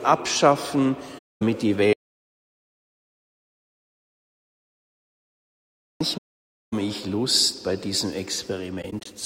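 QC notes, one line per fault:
1.18–1.42 s, AAC frame loss with muting. The sound fades out into a hole of about 0.23 s and fades back in. Missing frames were decoded as a zeroed spectrum. The overlapping windows soften both edges. The length points to a run of about eleven frames.
1.93–6.00 s, audio dropout to silence. The sound cuts off mid-flow and returns about 4.07 s later. The gap is silent, with no room tone at all. Everything in between is gone. The likely cause is a lost input, such as a dropped device or link or a stray mute, while the recorder kept writing silence.
6.17–6.73 s, AAC frame loss with muting. A longer soft-edged hole of about 0.55 s follows soon after the silence ends. The decoder again filled the lost frames with zeros, and the window overlap fades the edges. That length fits roughly 26 frames.
8.82–9.06 s, AAC frame loss with muting. Four brief soft gaps are scattered across about 0.23 s, none longer than about 20 ms. 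The result is a fluttering break rather than one hole. Single zeroed frames each fade out and back in.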